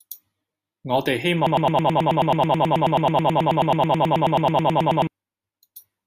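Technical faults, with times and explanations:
1.47 to 5.07 s, broken-record loop: likely a playback or stream stall, with the system re-sending its last held fragment. Right after "我哋希", a 108 ms slice repeats exactly, back to back, 33 times, and the speech that should fill those seconds is lost.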